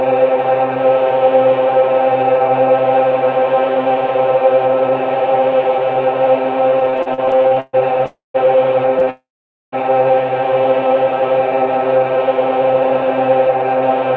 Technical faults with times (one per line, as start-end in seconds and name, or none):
6.80-8.05 repeated stalls (stutter)
8.06-8.37 call audio freeze
8.99-9.09 short stall from a late packet
9.10-9.75 call audio freeze
13.01-14.02 jitter buffer speed-up